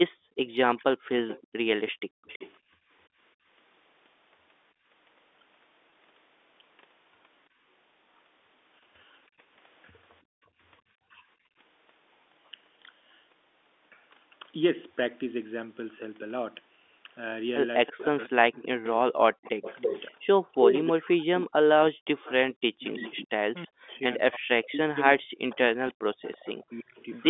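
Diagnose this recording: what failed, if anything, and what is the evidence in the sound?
Echo leak, at the call-processing stage on the far end: from 0.09 to 2.53 s and again from 17.86 to 27.17 s, a delayed copy of the speech trails the original by about 329 ms. It is about 20 dB down at first and about 10 dB down later. The likely cause is a loudspeaker-side echo canceller passing residual echo back.

Background gated by the echo canceller: between 0.16 and 0.38 s, 1.94 and 4.87 s, and 9.27 and 11.57 s, the room sound dips sharply, by about 40 dB in the first two spans and about 33 dB in the third. The canceller is clamping the microphone while its loudspeaker plays and then releasing it.

Speech suppressed in double talk: at 0.79 to 0.83 s the speech briefly dips by roughly 10 dB. From 18.11 to 27.07 s it drops by up to roughly 40 dB across several seconds, overlapping the echo. This is likely the canceller attenuating the near talker along with the echo it cannot separate.

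Packet loss with pitch repetition, at the network stage: at 5.90 s and from 26.66 to 26.68 s, a short buzzy hold of the last pitch period bridges a 20 ms gap, which fits one lost 20 ms packet concealed by repeating the waveform before speech resumes.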